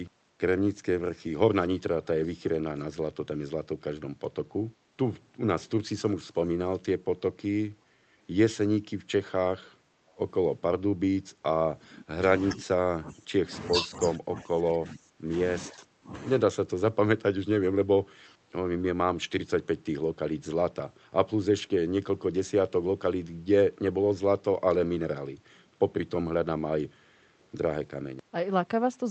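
Speech, carried over a call link whose Opus coding leaves the band ending near 8 kHz, consistent with roughly 32 kbps. From 1.61 to 2.79 s an echo leak is audible: a delayed copy of the other party's voice, trailing by about 395 ms and sitting around 25 dB below the main speech, likely from a loudspeaker echo canceller that let residual pickup through. Speech suppressed in double talk appears twice: a brief dip of around 5 dB at 3.77 to 3.81 s, and a longer stretch between 11.83 and 16.16 s where the voice drops by as much as about 25 dB across roughly 3 s in total, likely because the echo canceller could not separate the local talker from loudspeaker playback and attenuated both.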